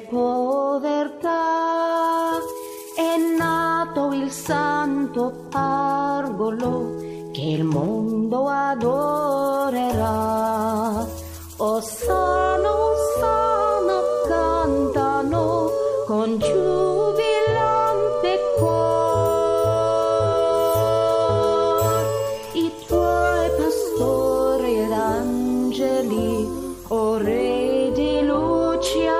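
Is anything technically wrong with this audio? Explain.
No, nothing here sounds technically off, so there's nothing to flag.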